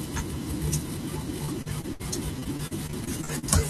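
From 1.45 to 2.01 s the speech turns choppy with repeated packet loss, giving that robotic sound: a few short holes, the longest about 61 ms, each patched by stretching the last bit of audio. It comes back harder from 2.39 to 3.44 s, with around ten smaller dropouts, none over about 41 ms. In both stretches roughly a quarter of the time is filled-in sound, so it comes out choppy, with pieces missing.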